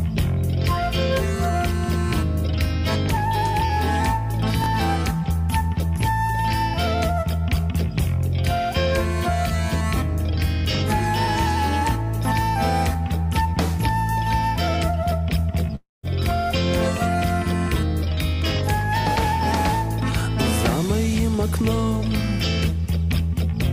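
At 4.62 s there's a quick jumbled blip lasting until about 4.66 s, and it's a case of chunks out of order. One 20 ms slice of audio got written a chunk late, so it plays after the piece that should have followed it. Nothing actually goes missing, but swapping them creates three hard joins in a few hundredths of a second, so you hear a tiny garbled stutter.

Around 15.75 s the sound gives way to a fading buzzy continuation of whatever was playing, which thins out into silence before the audio picks up again at about 16.05 s. Roughly 280 ms of material is simply gone, and what resumes skips past it. That's most likely a long network dropout, where nothing arrived for that stretch and the receiver padded the gap by stretching out the last sound until it died away.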